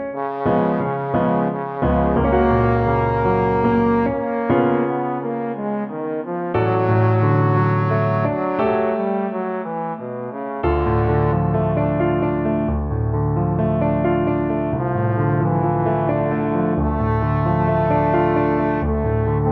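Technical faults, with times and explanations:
No technical faults detected.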